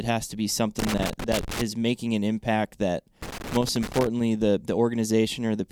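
Irregular bursts of scratchy crackle break into the speech from 0.79 to 1.61 s and again from 3.22 to 4.07 s. This is loose connector crackle: a worn or dirty contact keeps making and breaking as it shifts, chopping the signal into rough fragments.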